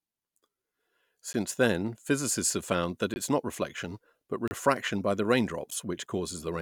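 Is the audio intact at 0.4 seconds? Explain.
Yes, the speech at 0.4 seconds is intact, with no dropout, glitch or other fault at that moment.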